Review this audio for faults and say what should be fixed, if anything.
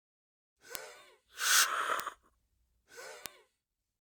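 Three bit error spikes sit at 0.75 s, 2.00 s and 3.26 s, each a single sharp tick with no connection to the surrounding sound. A flipped bit in memory or on a digital link throws one or two samples by a power of two before they snap back. On the waveform each is a lone vertical needle, peaking at about -6 dBFS for the first two and about -12 dBFS for the last, which is slightly wider. On a spectrogram each is a thin full-height stripe. Prevent them with error-checked memory and links, verified with checksums on transfer.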